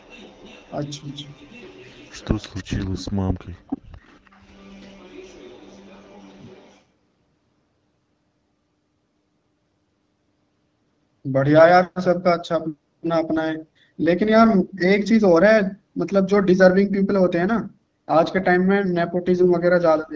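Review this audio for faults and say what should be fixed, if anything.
Echo leak: A faint copy of the talker's voice trails the original by 330 ms from 0.0 to 2.64 s, about 25 dB down. It surges briefly to about 10 dB below the speech between 3.67 and 3.81 s, then drops to about 30 dB down from 4.01 to 6.81 s. This is likely a far-end loudspeaker whose echo canceller left residual pickup that was sent back. Retune or replace the far end's echo canceller and reduce its loudspeaker-to-microphone coupling.

AMR bit errors: Short bursts of hoarse, gargly roughness appear at 13.69 to 13.75 s and 19.36 to 19.49 s. Pitch and level hold, but the texture turns scratchy. Flipped bits in the less protected part of the AMR-WB frames put the excitation pulses in the wrong places and skew the gain and spectral values, while the checksum on the core bits still passed. The errors run at roughly 5 and 7 percent, spread over what fits three and five frames. 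Improve the radio link margin or enable stronger channel protection on the weak link.

Speech suppressed in double talk: From 20.01 s to the end, the talker's voice dips by as much as about 20 dB over roughly 150 ms. The likely cause is the echo canceller failing to separate the local talker from loudspeaker echo while both sides spoke, so it attenuated everything. Use an echo canceller with better double-talk detection and less aggressive residual suppression.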